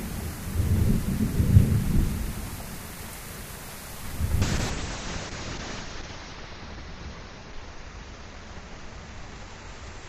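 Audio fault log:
4.43 s to end: call bitrate drop. From 4.43 s the sound turns coarser and duller and stays that way to the end of the clip. The change fits the encoder's bitrate being cut from around 96 kbps to about 6 kbps, holding at that floor for roughly 1.4 s. With so few bits Opus quantises coarsely, adding roughness and a watery texture, and narrows the coded band from 20 kHz to 8 kHz, which removes the upper highs.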